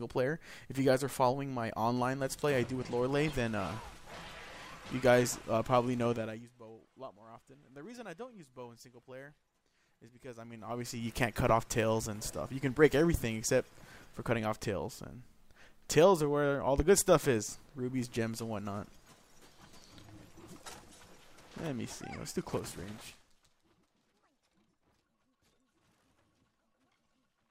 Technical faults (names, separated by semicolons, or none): zipper noise